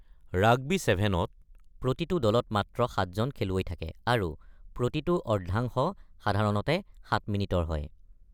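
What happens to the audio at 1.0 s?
Nothing goes wrong at 1.0 s; the speech plays through that moment intact, with no dropout, click, distortion or other fault.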